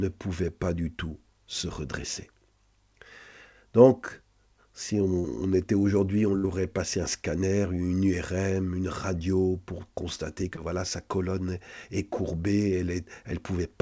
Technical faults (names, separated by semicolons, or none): short concealed packet loss; burst of packet loss